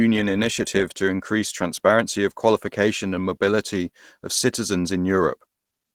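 From start to end, the speech sounds muffled and hoarse, with a rough, grainy edge. The top end still reaches about 20.4 kHz. This is likely Opus compression in its hybrid speech mode, which fits a low bitrate near 16 kbps.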